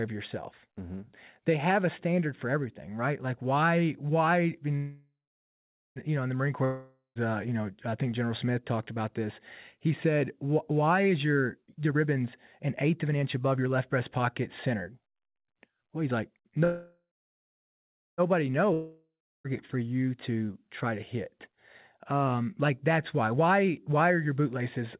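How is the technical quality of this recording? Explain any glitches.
The recording sounds like a phone call, and it has several clear glitches. Nothing above 4 kHz comes through, which fits a narrowband call codec such as G.711 at 64 kbps. The codec's usual coding noise is present. The glitches are two call audio freezes, two long network dropouts and three jitter buffer speed-ups.

Call audio freezes occur from 4.76 to 5.99 s and from 16.64 to 18.21 s. In each, the last sound hangs on as a fading buzz or hiss, then goes silent. The silence lasts about 0.78 s in the first and 1.1 s in the second. The likely cause is packets held up in transit until the jitter buffer ran dry. When they arrive, the sound resumes where it stopped. Nothing is lost, but 1.2 s and 1.53 s of gap are inserted.

Long network dropouts occur from 6.65 to 7.18 s and from 18.73 to 19.47 s. The second ends just before "for you". 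Each starts with a fading buzz, then silence of about 80 ms and 0.3 s. This is likely audio that never arrived. When sound returns, it has skipped ahead. About 0.51 s is missing in the first and about 1.2 s in the second.

Jitter buffer speed-ups run from 11.09 to 16.61 s after "said why", from 20.44 to 20.92 s, and from 23.34 s to the end after "like that's why". The speech sounds hurried, at 118%, 108% and 116% of normal speed, while the pitch stays the same. The receiver had built up too much buffered audio. It trimmed many tiny pitch-period slices to catch up, removing roughly a second, a few hundredths and about 0.3 s.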